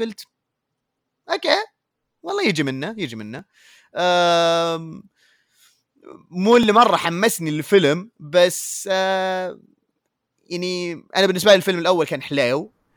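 From 0.15 s to 9.88 s the speech carries about four regular clicks, roughly every 3.24 s, likely clock drift buffer slips from a clock mismatch near 1000 ppm dropping or repeating some 150 samples. Waveforms show small discontinuities; spectrograms show thin vertical broadband lines.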